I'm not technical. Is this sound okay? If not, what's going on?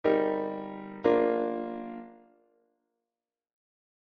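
No. From start to finish the audio has a fast, buzzy flutter, a rough robotic wobble in loudness repeating around fifty times a second. This is overlap-add ripple. The sound was split into many short, overlapping slices and stitched back together, but the overlaps were not matched to keep the volume steady. Each seam adds a bump or dip in level, and those bumps are fast enough to blur into a constant shaky texture.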